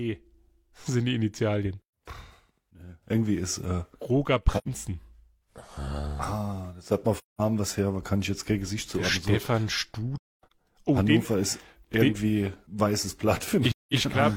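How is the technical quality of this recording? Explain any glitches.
The recording has four short dropouts where the speech goes silent.

These are AAC frame loss with muting, at 4.58–4.68 s, 7.15–7.41 s (between "das hat mal" and "was her aber kann"), 10.18–10.52 s, and 13.71–13.94 s (right after "ist irgendwie den weißes"). The lengths fit whole frames of about 43 ms each, roughly two, five, seven and five frames. The decoder zeroes each missing frame, and the overlapping transform windows fade the speech out and back in, leaving soft-edged holes. The 10.18 s gap is scattered, with the longest silent stretch around 300 ms. A hard dropout would click at its edges, and concealment would fill the gap with repeated or noisy sound.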